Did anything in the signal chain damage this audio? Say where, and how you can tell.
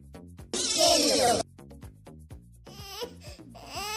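No, nothing in the chain audibly damaged it.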